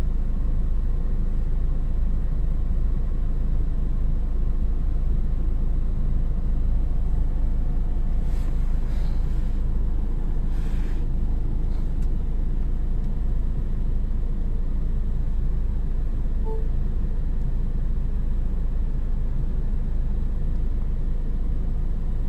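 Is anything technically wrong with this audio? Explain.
Yes. Imaging from sample-and-hold upsampling runs throughout. Each sample was simply repeated to raise the rate, which fits a conversion from 24 kHz, so mirrored spectrum copies sit between 12 and 24 kHz, about 45 dB down, heard as a faint metallic fizz tracking the sound's level.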